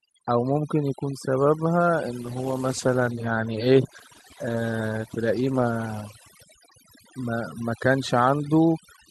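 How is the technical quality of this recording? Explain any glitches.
Two faults affect this speech recording. Overdone noise removal runs throughout: the noise reducer was set so aggressively that frequency bands near its noise estimate are pulled down or muted, taking quieter speech detail with them. The background drops and breaks up into twinkling specks.

A call bitrate drop runs from 2.22 s to 7.33 s. The call's bandwidth estimate fell and the encoder dropped from 64 kbps to 17 kbps, holding the lowest rate for about 3.5 s. At that rate coding is coarser and high frequencies are cut, so the voice turns rough and muffled until the bitrate recovers.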